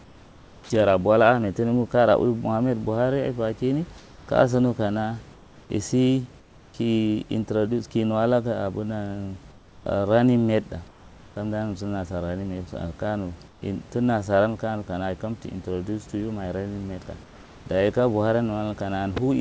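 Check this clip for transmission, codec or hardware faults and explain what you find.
Eight pauses in this speech clip have their real room background replaced by comfort noise: 0.04–0.70 s, 3.98–4.28 s (just before "kaya so nu kana"), 5.34–5.70 s, 6.40–6.74 s (just before "introduce ka nuwa"), 9.52–9.86 s, 10.88–11.36 s, 13.48–13.62 s and 17.24–17.66 s (just before "dayi ka"). The likely cause is discontinuous transmission. The sender stops sending during silence, and the receiver fills each gap with synthetic noise shaped only roughly like the room. The live background, about 27 dB below the speech, gives way to a flat, detail-less hiss, typically about 3 to 5 dB quieter and about 8 dB quieter at 13.48 s. It snaps back when speech resumes. This differs from a noise gate or dropout because the pause never goes silent. It differs from noise suppression because the texture is uniform rather than a thinned version of the real room. 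Throughout the clip, nothing is heard above 8 kHz, which points to a wideband call codec such as G.722.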